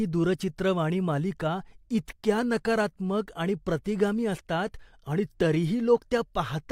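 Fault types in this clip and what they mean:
No faults are audible.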